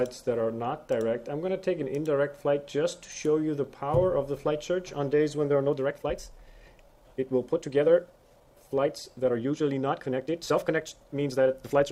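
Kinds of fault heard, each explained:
time-stretched section: Software likely sped the audio up 1.43 times from 5.47 s by dropping short pieces, so pace abruptly turns rushed with unchanged pitch.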